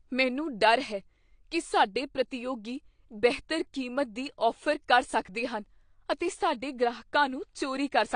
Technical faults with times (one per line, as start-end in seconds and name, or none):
0.00-8.15 AAC compression